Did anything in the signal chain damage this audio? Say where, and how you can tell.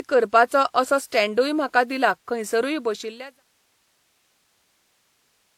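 Yes, at the codec stage, throughout the speech. Two kinds of compression artefact are heard at once. There is the smeared, band-limited texture of a low-rate parametric codec, and over it a second layer of quantisation swirl. The spectrum stops at 18.4 kHz. This points to transcoding between lossy codecs, likely a low-rate HE-AAC encode re-encoded to WMA. The later encoder spends its bits on the earlier damage and adds its own. The smooth fade-out ending near 3.44 s carries the same texture.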